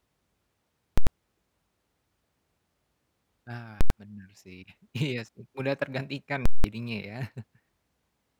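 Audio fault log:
0.98 to 6.64 s, invalid numbers at full scale: three short slams to full scale, at 0.98 to 1.07 s, at 3.81 to 3.90 s just before "bener sih iya sih", and at 6.46 to 6.64 s between "iya sih mudah tergantikan" and "jadinya ya". A calculation blew up to infinite or invalid values, so the output pinned at maximum for a whole block. That's 93 ms twice, fitting a 4096-sample block, then 186 ms, about double. The speech is gone underneath each block.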